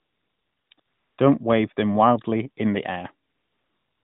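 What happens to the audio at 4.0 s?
AMR comfort noise runs from 3.28 s to the end of the clip at 4.03 s, so 4.0 s falls inside it. The sending phone decided the talker had gone quiet and stopped transmitting speech frames for the last 0.77 s. The receiving end filled that gap with synthetic noise built from a rough estimate of the background's level and spectral shape. The real background is replaced by a smooth, steady hiss, still limited to the narrowband AMR-NB range below 4 kHz.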